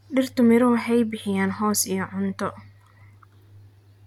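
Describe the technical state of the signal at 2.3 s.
Nothing is wrong with the signal at 2.3 s; the audio is intact at that moment.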